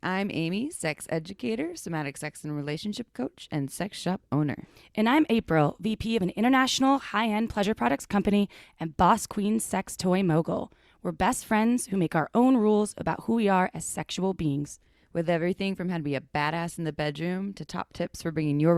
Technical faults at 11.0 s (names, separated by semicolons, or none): none